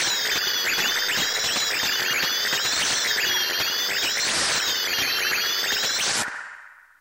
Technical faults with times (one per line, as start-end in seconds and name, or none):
0.72-1.41 stuck bit